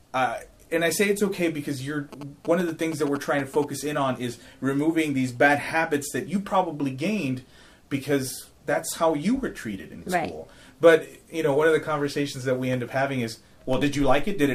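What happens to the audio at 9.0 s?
Nothing goes wrong at 9.0 s; the audio plays through that moment intact, with no dropout, click or distortion.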